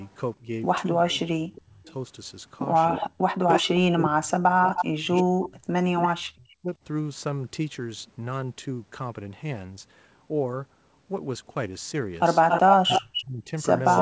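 Speech, with two kinds of fault that overlap in time. Speech suppressed in double talk pulls the talker down by as much as about 35 dB from 0.4 to 1.9 s, from 3.12 to 6.71 s, and again from 12.84 s to the end. The voice dips and breaks into pieces for about a second in the first stretch and about three seconds in the second. The likely cause is an echo canceller that could not separate this talker from loudspeaker echo while the far side was also speaking, so it attenuated everything. Echo leak also runs through the clip as a delayed copy of the voice. It is faint, at about 25 dB below the speech, with a 361 ms delay from 1.55 to 1.93 s. From 2.89 to 6.08 s it is much stronger, only about 5 dB down, with a 281 ms delay. From 12.49 s to the end it comes back at the same 281 ms delay and roughly equal in level to the speech itself. This likely comes from a speakerphone whose canceller did not remove all of what its microphone picked up and sent it back. 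The audio is band-limited to 8 kHz, which fits the G.722 codec at 64 kbps on a normal call path.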